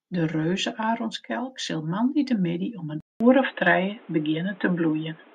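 At 3.00 s the speech drops out for about 0.2 s, then returns dull and boxy through to the end, with nothing above 3.9 kHz, a level shift of around 5 dB and a new noise floor roughly 30 dB down. The likely cause is an input switched to a poorer device.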